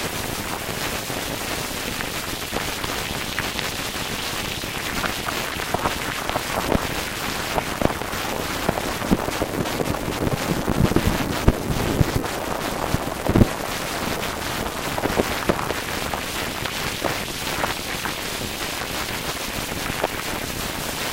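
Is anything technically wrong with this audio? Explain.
No technical faults are audible.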